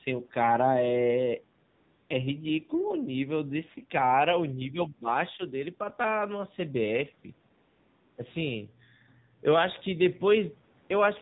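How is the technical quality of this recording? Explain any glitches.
The recording is degraded speech with a mobile-call sound throughout and three brief glitches.

The whole clip carries AMR narrowband mobile codec damage. Nothing above 4 kHz survives. The voice sounds buzzy and synthetic, which fits a low mode near 7.4 kbps.

AMR comfort noise appears from 1.70 to 2.10 s and again from 7.58 to 8.18 s. Speech frames stopped, and the receiver substituted smooth, steady synthetic noise that switches in abruptly.

Between 4.72 and 5.08 s, the voice dips by roughly 15 dB in patches totalling about a fifth of a second. This is likely speech suppressed in double talk, with the echo canceller ducking the talker.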